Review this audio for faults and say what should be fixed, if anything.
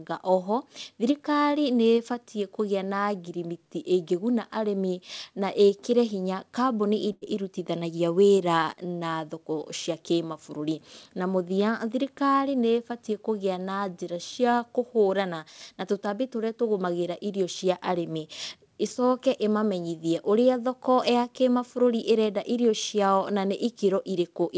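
A burst of packet loss hit from 7.12 to 7.23 s: consecutive packets never arrived in time, so the receiver stretched the last received sound for about 94 ms, fading it into a held buzz or hiss, and roughly 100 ms of speech is gone when playback resumes. Adding forward error correction or a slightly deeper jitter buffer would help prevent this.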